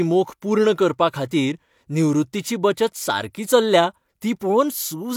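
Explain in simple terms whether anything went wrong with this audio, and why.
Nothing went wrong that I could hear: listening to this speech recording, no problem stood out at any point.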